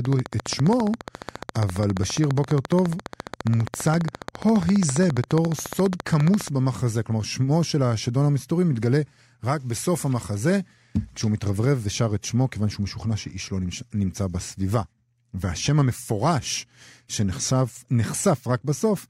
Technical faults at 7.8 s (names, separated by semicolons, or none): none